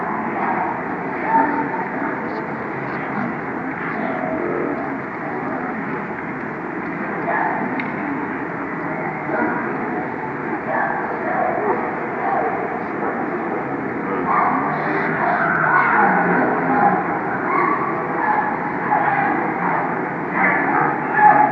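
Wrong sample rate throughout: everything runs at half speed and a full octave low, which fits 48 kHz material being played back at 24 kHz without conversion.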